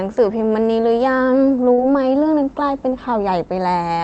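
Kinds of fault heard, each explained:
Short concealed packet loss: two brief gaps, 40 ms and 20 ms, were filled by continuing the preceding sound, showing as smeared, overly uniform patches on a spectrogram.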